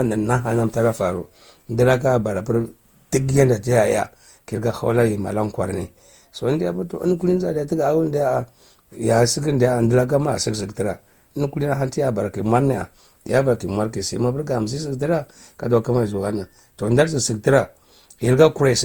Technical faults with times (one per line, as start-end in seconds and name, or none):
0.00-18.84 generation loss